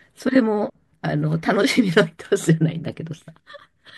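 No technical faults can be heard in the speech recording. Nothing in the audio stands out as a problem at any point.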